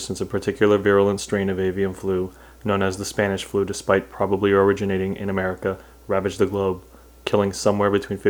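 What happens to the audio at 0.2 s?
Nothing goes wrong at 0.2 s; the audio plays through that moment intact, with no dropout, click or other fault.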